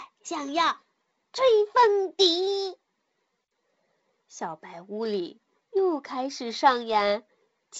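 The speech has passed through G.722 wideband telephone coding, with nothing above about 7.7 kHz and a light hiss and added noise in the coded bands that fit the codec's lower 48 kbit/s mode.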